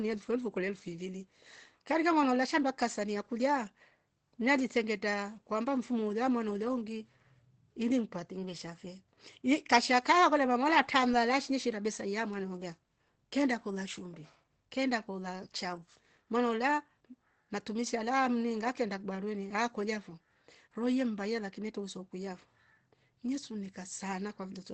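From start to finish the speech is muffled and hoarse, with plainly audible coding damage and nothing above about 8.7 kHz. The likely cause is Opus compression in its speech (SILK) mode: at a rate that points to around 16 kbps, the encoder models the voice over a wideband range and discards everything higher. Unlike MP3 damage, there is less swirling or watery warble from spectral holes, and more a steady, roughened, band-limited dullness.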